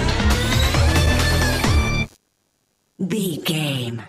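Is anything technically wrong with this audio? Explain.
Yes. Computer activity noise runs from 0.50 s to 3.89 s. As the processor, graphics card or mouse changes its load, the current it draws shifts the ground that the audio circuit shares, and that movement enters the signal path. Here it is a faint buzzing chirp pulsing roughly a hundred times a second, sitting around 35 dB below the main sound and tracking the machine's activity rather than anything in the audio itself.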